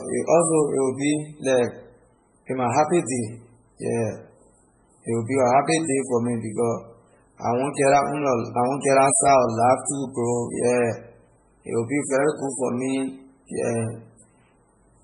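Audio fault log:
Throughout: MP3 compression. The speech is heavily degraded, with nothing above 10.4 kHz and a watery, swirling texture with metallic chirps on s sounds. This is likely a bit-starved encoder, which fits a rate near 16 kbps, cutting treble and switching weak frequency lines between frames.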